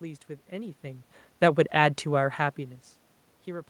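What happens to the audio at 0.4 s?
The audio is intact at 0.4 s, with no system fault at that moment, and the room noise heard there is simply part of the recording.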